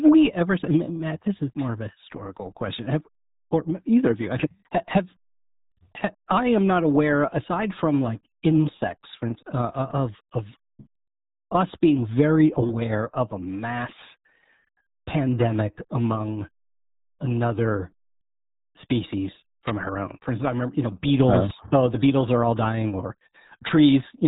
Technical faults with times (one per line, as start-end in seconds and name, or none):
0.00-24.27 RealAudio 14.4 codec